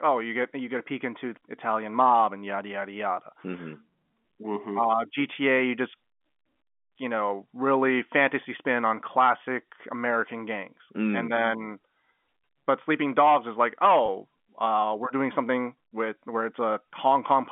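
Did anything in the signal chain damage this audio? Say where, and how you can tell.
Yes. Packet loss with pitch repetition hits at 14.06 to 14.08 s, in the network stage. A 20 ms gap, which fits a single lost packet, was bridged by repeating the last pitch period, so the speech briefly sounds held and buzzy before resuming over the 200 Hz to 3.4 kHz telephone band.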